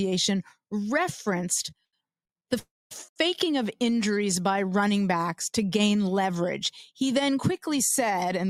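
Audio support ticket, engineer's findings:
Held sound with slight buzz, 1.85 to 1.95 s. Short stall from a late packet: jitter buffer ran empty and the receiver stretched the last sound 80 ms until arrival. Playback resumes in place. Nothing lost, latency up 80 ms.

Buzz fading to silence, 2.59 to 2.93 s. Call audio freeze: 316 ms inserted, 230 ms of it silent, then resumes where it stopped. Nothing lost, latency up 316 ms. Likely packets delayed in transit, draining the jitter buffer.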